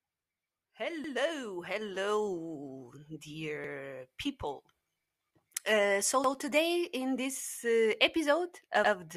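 At 1.04, 3.64, 6.24 and 8.84 s the speech stutters. These are overlapping chunks: each 2.5 s block restarts 100 ms early, so that slice plays twice. Unlike a dropout, nothing goes missing. Material repeats at a steady rhythm.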